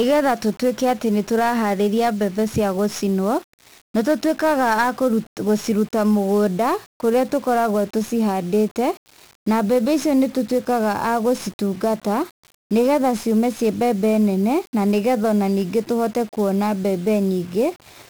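Speech, and the whole thing's been through 1-bit DFPWM compression: heavy fuzz and crackle throughout, treble swamped in hiss, which fits a 48 kbps single-bit stream.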